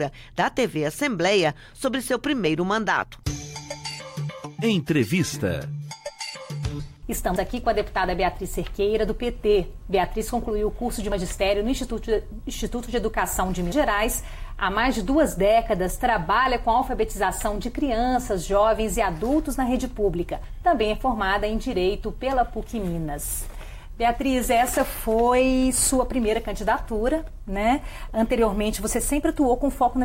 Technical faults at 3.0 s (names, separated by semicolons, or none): dropped buffer (overrun)